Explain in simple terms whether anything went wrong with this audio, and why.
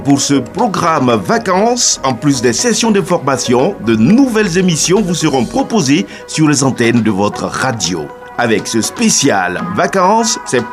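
Nothing went wrong that I could hear: I listened all the way through and no problems stood out at any point.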